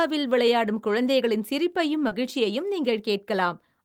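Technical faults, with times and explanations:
2.07 to 2.13 s, short concealed packet loss: right after "விளையாடும் குழந்தைகளின் சிரிப்பையும்" about 40 ms of the speech didn't arrive at the decoder in time, so the receiver papered over the gap by extending the last bit of sound it had, then eased back into the real signal. That stretched-and-blended patch is why you hear a quick smear or wobble there instead of a clean transition.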